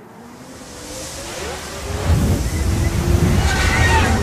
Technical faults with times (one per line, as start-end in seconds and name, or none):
0.59-1.59 channel delay (comb filtering)